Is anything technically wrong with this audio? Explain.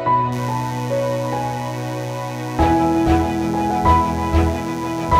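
Yes. From 0.32 s to the end at 5.19 s, a steady, raspy mains buzz sits under the sound, roughly 20 dB below it. The 60 Hz hum isn't smooth but gritty, because sharp switching spikes, from something like a dimmer, a rectifier or an unshielded cable, enter the signal twice per mains cycle. Those spikes spread energy across many harmonics of 60 Hz, reaching up to several kHz and giving the buzz its edge.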